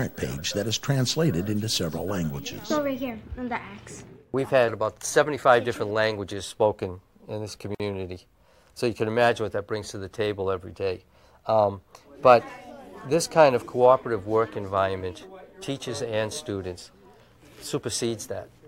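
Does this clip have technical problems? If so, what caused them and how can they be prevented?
Yes. At 7.75 to 7.80 s a silence of about 51 ms opens in otherwise continuous sound, a gap at a join of encoded pieces. Separately encoded pieces were joined without trimming the encoder's start-up delay and last-frame padding. Unlike a dropout, nothing is lost: the sound resumes exactly where it stopped, and the edges are smeared rather than hard-clicked. Encoding the material as one continuous run, or trimming delay and padding when joining, prevents it.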